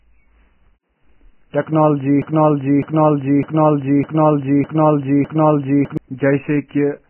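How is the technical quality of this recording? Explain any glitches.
The technical quality is poor, with heavy codec damage throughout and a long stuck passage in the middle.

Across the whole clip the speech is band-limited, with nothing above 3 kHz, and sounds hissy and grainy with smeared consonants. This is likely Vorbis compression at a very low bitrate, around 10 kbps. The coarsely quantised treble turns detail into noise, unlike the plain dullness of a simple low-pass filter.

From 2.22 to 5.97 s a broken-record loop occurs: a 0.61 s fragment repeats back to back six times, identically each time. The likely cause is a stalled player or stream resending its last buffer, so the speech due in that span is lost. Exact repetition distinguishes it from a stutter or echo.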